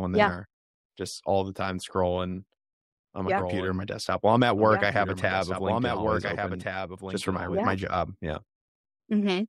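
From 3.37 s to 7.59 s a doubled audio track appears: the speech plays alongside a copy of itself trailing by about one and a half seconds and roughly 5 dB quieter, likely from a second, slower capture path. On a spectrogram, full-band patterns repeat at that offset, starting and stopping abruptly.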